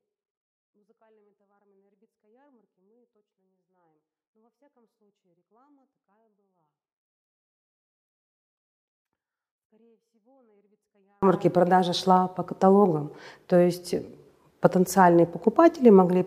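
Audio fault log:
0.00–11.23 s: 24-bit alignment error (too quiet). Clean audio sits about 48 dB down, nearly inaudible, because low-byte 24-bit samples were read as 32-bit integers.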